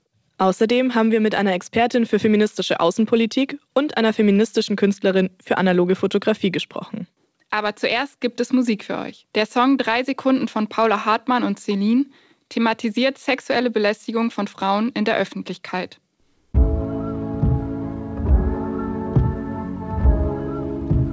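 No technical fault can be heard anywhere in this audio. It comes through a working call path, and the band stops at 8 kHz, which fits a wideband call codec such as G.722.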